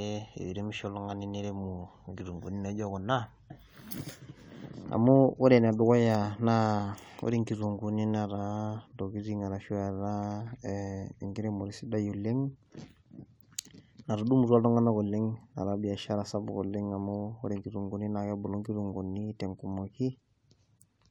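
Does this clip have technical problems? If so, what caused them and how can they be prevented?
No, nothing here sounds off technically, so there's no problem to trace back or guard against this time.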